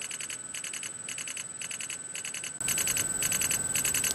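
Input switched to a poorer device, 0.0 to 2.6 s: the opening stretch is noticeably quieter and duller, with nothing above 11.4 kHz and a faint background noise sitting well below the signal. At 2.6 s a 20 ms silence breaks the audio, after which the sound returns brighter and louder. This points to the recording likely running on a lower-grade input for that stretch before switching to a better device.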